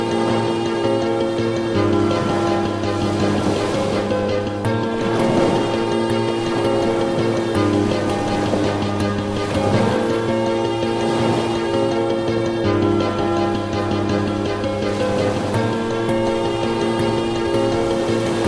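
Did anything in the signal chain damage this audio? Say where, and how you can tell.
Yes. A wrong sample rate at the playback stage affects the whole clip. Everything runs 1.38 times too fast and sits about 5.5 semitones high, which fits audio recorded at 16 kHz being clocked out at 22 kHz with no conversion. Speed and pitch move together by the same ratio, without the warble of a pitch-shifter or the smearing of a time-stretch. That is what separates it from deliberate processing.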